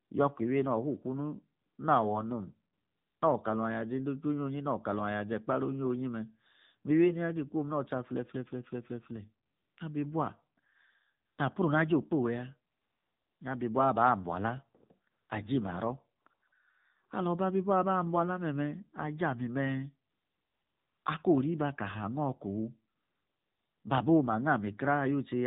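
From start to finish the speech passes through the AMR narrowband mobile codec at 7.4 kbps. Nothing is heard above 4 kHz, and the voice sounds buzzy and synthetic, which sets it apart from a simple low-pass filter.

AMR comfort noise appears in thirteen pauses between 0.04 and 23.84 s, lasting from 20 ms to 960 ms. The longest are at 12.72, 20.10 and 22.96 s, and there is a quick cluster from 16.22 to 16.52 s just after "aji maro". In each pause the sender stopped transmitting speech frames, and smooth synthetic hiss fills the gap. That hiss, rather than dead silence, distinguishes it from a dropout.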